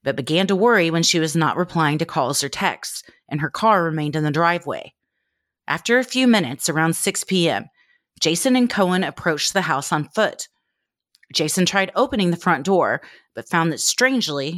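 Speech recording, no technical faults detected.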